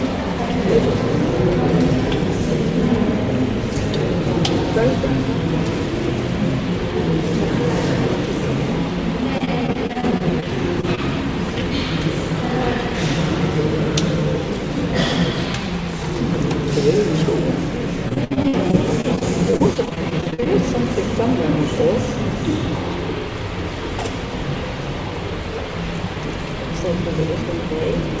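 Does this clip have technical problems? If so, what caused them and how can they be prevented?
Yes. From 9.38 to 10.45 s and again from 18.09 to 20.48 s, the sound turns choppy and robotic, with pieces dropping out. This is repeated packet loss (robotic sound). In the first stretch, 11 gaps of up to 22 ms were patched by continuing the preceding audio, covering about 18% of the span. In the second, 24 gaps of up to 61 ms covered about 22%. Preventing it means giving the call a steadier network path, for example wired instead of congested Wi‑Fi, or enabling forward error correction.

At 10.81–10.85 s and 10.95–10.99 s there are brief smears or wobbles. These are short concealed packet losses: about 20 ms of the stream went missing each time, and the receiver extrapolated from the last sound before blending back into the real audio. The same network fixes, plus a slightly deeper jitter buffer, would prevent these.

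The audio also has nothing above 8 kHz, which fits the G.722 codec used on the call path.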